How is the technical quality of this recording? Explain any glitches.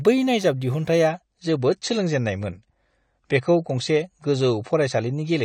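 The recording has one clear quality problem. An adaptive stream at a lower bitrate takes over from 1.08 s to the end: the stream switched to a leaner encoding, likely because the connection slowed. The treble abruptly disappears above 9 kHz, and the speech turns duller and swirly with no gap, which fits a drop from around 96 kbit/s AAC to around 32 kbit/s.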